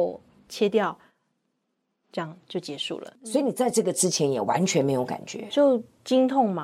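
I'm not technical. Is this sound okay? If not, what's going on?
Yes, the recording has no technical problems at any point.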